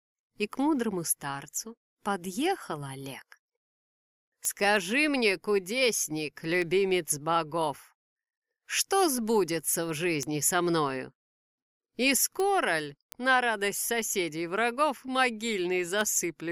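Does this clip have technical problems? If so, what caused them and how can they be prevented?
Yes. Word clock ticks run from 0.12 s to 16.01 s, around twenty sharp ticks at a steady rate of about one every 0.7 s. The receiving device's clock differs from the sender's by roughly 30 ppm, so each time the two clocks slip past each other a single sample is dropped or repeated. On a waveform each tick is a one-sample step or glitch, and on a spectrogram it is a thin vertical broadband line, with the lines evenly spaced. Locking the receiver to the sender's word clock, or passing the link through a sample-rate converter, prevents this.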